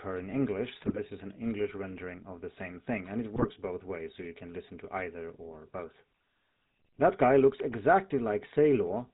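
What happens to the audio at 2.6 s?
At 2.6 s the speech carries GSM full-rate codec damage, present from start to end rather than just at that moment. The codec models the vocal tract and drives it with sparse, regularly spaced pulses that keep only every third excitation sample. That gives the voice a plainly audible buzzy, gravelly roughness, which fits the 13 kbps full-rate mode. On a spectrogram, energy stops sharply at 4 kHz, and the harmonics look smeared and grainy.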